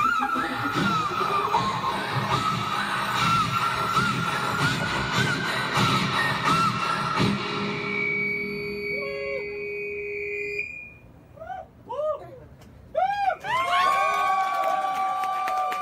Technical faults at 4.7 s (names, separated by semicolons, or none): none